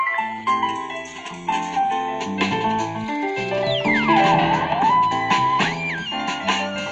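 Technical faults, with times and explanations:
0.0 to 2.0 s, adaptive stream starting at a low bitrate: for the first two seconds the top end sounds thin and partly synthetic, with heavier codec smearing, consistent with a spectral-band-replication codec at a very low rate, something like HE-AAC near 16 kbit/s. The player chose this lean version to begin playback fast, then, having gauged the connection, switched to a richer rendition, which fits AAC-LC around 96 kbit/s. Full treble and clarity return abruptly at 2.0 s without any dropout.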